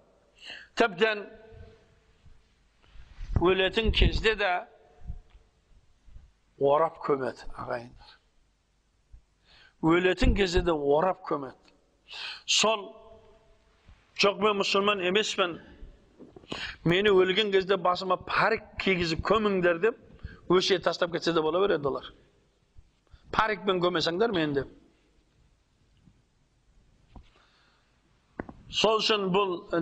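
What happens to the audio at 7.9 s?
Nothing goes wrong at 7.9 s; the audio plays through that moment intact, with no dropout, click or other fault.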